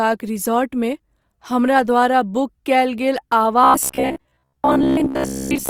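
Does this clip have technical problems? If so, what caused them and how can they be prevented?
Yes. Opus compression is audible throughout the speech, likely from encoding in its music (CELT) mode at a rate that fits about 24 kbps. The band stays full, reaching up to 20.4 kHz, but starved bands are filled with folded or noise-like content, so the voice sounds grainy and rough. A spectrogram would show speckled, noisy fill instead of clean harmonic lines. Encoding at a higher bitrate prevents this.

From 3.64 s to 5.69 s the speech becomes a rigid, metallic buzz at 66.8 Hz: robotic sound from repeated short buffers, likely because new audio arrived too late and the player looped the most recent chunk. A 66.8 Hz repetition fits a buffer of about 15 ms. Most of this stretch is repeats, with the real audio skipped. The waveform would show identical short segments tiling the section, and the spectrogram a comb of lines at multiples of 66.8 Hz. 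A larger playback buffer or better-timed audio delivery prevents it.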